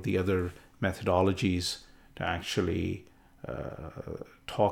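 No technical faults can be heard in this speech recording.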